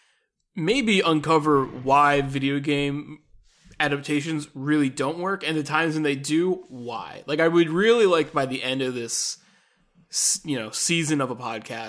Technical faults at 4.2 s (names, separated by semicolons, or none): none